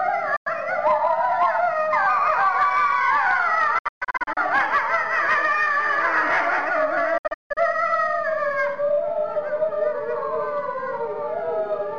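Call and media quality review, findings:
Digital broadcast dropout at 0.36–0.47 s, 3.78–4.38 s and 7.18–7.58 s: receiver mutes on failed frames, with short fades into silent holes (longest 0.16 s). Clean silence with no smeared concealment, unlike packet-loss concealment; hole lengths suggest roughly 32 ms frames.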